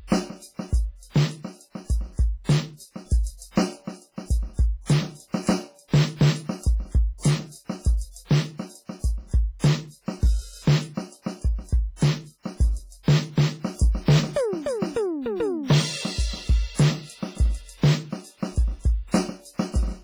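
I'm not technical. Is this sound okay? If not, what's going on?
No. Throughout the music, the loudest moments crackle and fuzz. That's hard clipping: the sound was pushed too loud for the equipment, so its biggest peaks got chopped flat.

The whole clip also sounds washy and ringing, with hiss that swells and fades with the music. That heavy damage is likely from WMA compression squeezing the file very small.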